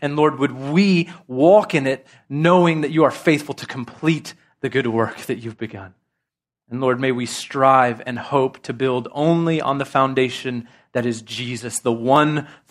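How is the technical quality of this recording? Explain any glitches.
The recording has one clear fault, in its second half. From 6.16 s, just after "work that you've begun", to 12.16 s, there are periodic USB or driver dropouts. Something stalls the audio path every 2.0 s, skipping well under a millisecond of samples each time. This leaves about four small, evenly spaced ticks in the speech.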